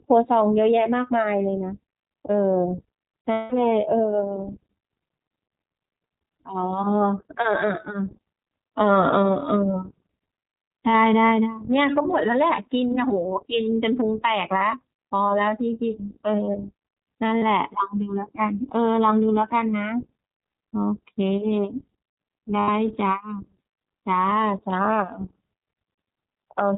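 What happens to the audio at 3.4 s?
Lost iLBC frames hit from 3.32 to 3.53 s. About 200 ms of packets, which fits ten 20 ms frames, never arrived. The decoder filled the hole by repeating the last pitch cycle blended with noise, so the gap sounds like a held, faintly buzzy, breathy vowel. Because each iLBC frame decodes on its own, the speech comes back cleanly almost immediately afterwards.

Underneath this, the whole clip passes through the iLBC codec, and its damage is plainly audible. Nothing above 4 kHz survives, and the speech has a slightly rough, synthetic edge, consistent with iLBC's 15.2 kbps mode with 20 ms frames.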